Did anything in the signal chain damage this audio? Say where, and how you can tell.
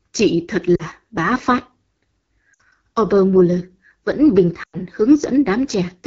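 Yes. The damage sits at the codec stage: the speech was carried through the AMR wideband (HD Voice) codec at a very low rate, and the rough, raspy texture across the whole clip fits the 8.85 kbit/s mode, one of its two lowest. At that rate the pulse-excited vocal tract model has too few bits to track the voice cleanly. The band up to 6.4 kHz comes out grainy, and the top edge to 7 kHz is only shaped noise.

At the network or radio stage, speech frames were lost three times and the decoder concealed them. Just after "chị thật", about 40 ms went missing at 0.75 to 0.83 s. A 60 ms gap follows at 2.54 to 2.60 s, and after "vẫn bình" the longest gap, about 100 ms, runs from 4.63 to 4.76 s. Each time the decoder repeated its last pitch and vocal tract settings at falling gain. Each gap drops almost to silence within two frames before the voice returns weak or rough for a moment.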